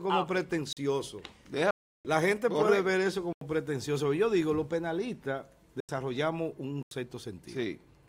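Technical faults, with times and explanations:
0.73–0.77 s, 1.71–2.05 s, 3.33–3.41 s, 5.80–5.89 s, 6.83–6.91 s: blocks of digital silence. The output drops to zero and back with no fade. The longest hole lasts 341 ms and three last 85 ms, which fits whole buffers left unfilled.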